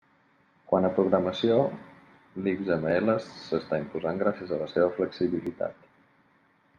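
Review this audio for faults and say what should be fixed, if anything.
Two abrupt jumps in the speech, at 2.91 s just before "s'està imposant gràcies a" and at 5.47 s, are likely a dropped buffer (overrun): roughly 5 ms and 10 ms of audio are skipped and the two sides spliced. Enlarging capture buffers and servicing them at higher priority prevents this.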